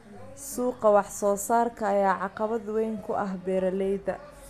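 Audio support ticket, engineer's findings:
No faults found on review.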